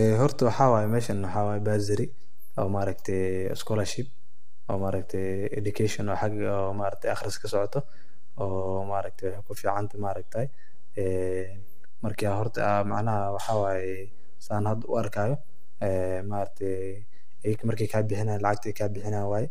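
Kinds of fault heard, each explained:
DC offset: The whole waveform sits shifted away from zero by a constant amount for the full clip, so the speech rides above or below the centre line instead of swinging evenly around it. It cannot be heard directly, but it eats into headroom on one side. On a waveform view the trace is visibly off-centre, and on a spectrogram it appears as a steady band of energy pinned at the very bottom, at 0 Hz.
Low-delay AAC compression: The speech sounds rough and grainy throughout, with plainly audible coding damage. This is likely AAC-ELD, the low-delay codec used for video calls, at a rate that fits about 32 kbps. It codes about 500 frequency lines a frame with a low-delay window. On a spectrogram the harmonic lines have noise filling the gaps between them, and the top band looks thinned or patchy rather than natural.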